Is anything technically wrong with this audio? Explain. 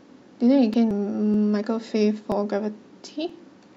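Yes, two kinds of fault show up in this speech.

Audio missing between chunks: there are small skips at 0.74, 1.34, 2.32 and 3.30 s. Each one drops roughly 20 ms and butts the two sides straight together, so the speech jumps slightly rather than pausing. From 1.34 s on they land about once a second, which suggests a recorder or processor likely working in 1 s chunks and losing a sliver each time it hands over to the next block.

Damaged data in a compressed stream: at 0.91 s there's a brief glitch, a short blip that doesn't belong to the speech. It's what you get when part of the compressed data there is corrupted. The decoder can't read those frames properly, loses its place, and has to hunt for the next valid frame header before it can carry on.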